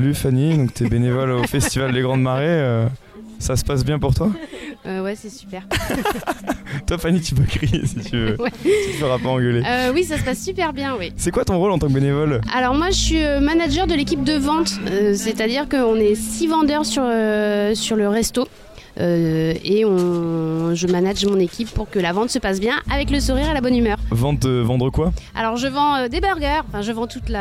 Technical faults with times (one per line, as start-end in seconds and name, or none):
none